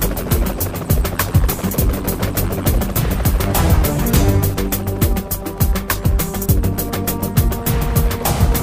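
At 3.25 s a loud pop cuts in: two sharp transients in quick succession, finished by 3.46 s, peaking around 10 dB above the surrounding signal. The audio carries on underneath without a break. The likely cause is a sudden voltage step or pulse entering the chain, from a connector being disturbed, a switch, a static discharge or a driver glitch. The downstream circuitry shapes that pulse into the hard, thumping double pop heard here.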